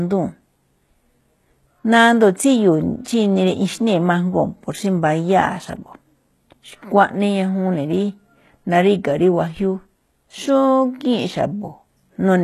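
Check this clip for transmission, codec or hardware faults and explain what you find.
Two faults are present: codec damage across the whole speech clip, and one pre-echo.

Throughout the clip, the codec damage is plainly audible, and the band stops at 12.3 kHz. The likely cause is HE-AAC compression at a low bitrate, consistent with about 16 kbps. That codec keeps only the lower spectrum and synthesises the treble by copying lower bands upward under a coarse envelope, so the upper harmonics don't line up with the real ones. On a spectrogram, the upper region looks like a blocky, repeated copy of the lower bands, with a hard ceiling at 12.3 kHz.

At 3.04 s there is a pre-echo about 16 ms long, heard as a short hiss just before an attack, which sounds softened or smeared. The transform codec spreads quantisation noise evenly across a block, so noise sized for the loud onset also lands in the quiet moment before it. 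On the waveform, a thin smear of noise appears ahead of the attack's leading edge. On a spectrogram, it shows as a brief broadband haze preceding the onset.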